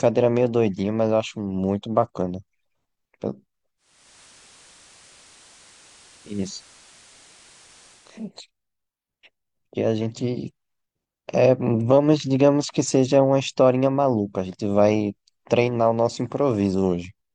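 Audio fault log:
3.77 to 8.31 s, digital radio blending to analogue: the receiver loses the digital stream and cross-fades over about 450 ms to the same station's FM signal, then fades back the same way at 8.31 s. You hear FM hiss come up underneath the speech, somewhere around 25 dB below it, for the length of the analogue stretch. The level doesn't jump at either changeover, so the rising and falling hiss is what gives away the switch.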